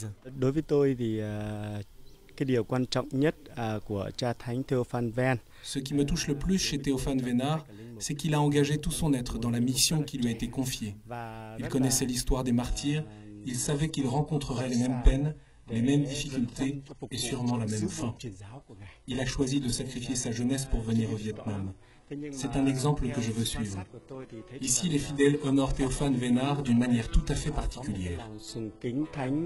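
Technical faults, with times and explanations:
12.69–29.46 s, adaptive stream at a lower bitrate: at 12.69 s the sound suddenly loses its top end, with nothing above 11.5 kHz, and there is more codec smearing. There's no gap. The player just switched renditions mid-stream when the connection slowed. The character fits a jump from a roughly 96 kbit/s AAC stream down to a low-rate HE-AAC version around 12 kbit/s, and it stays that way to the end.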